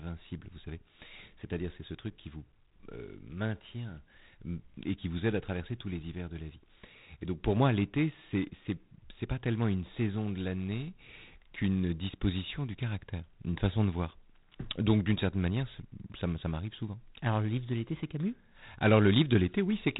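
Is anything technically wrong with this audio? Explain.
Yes. G.726 ADPCM coding runs through the whole speech clip. Each sample keeps only a coarse difference from an adaptive prediction. The harsh, rasping hiss tracking the speech level fits the 24 kbit/s rate. Nothing passes above 3.8 kHz, so the sound is muffled.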